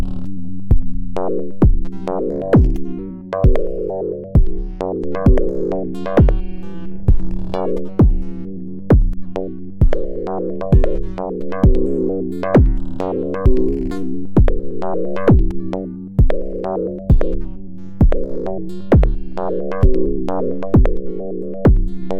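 The recording of sounds contains no audible technical faults. Nothing in it calls for a timestamp or a note of its own.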